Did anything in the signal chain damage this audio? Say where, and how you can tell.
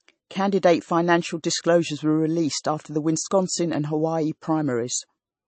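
Yes. Throughout the speech there is a watery, swirling texture, with sibilants turning metallic and nothing above 8.3 kHz. That points to the codec stage, likely MP3 compression at a low bitrate around 32 kbps, where weak frequency lines flicker between frames and the treble is cut off.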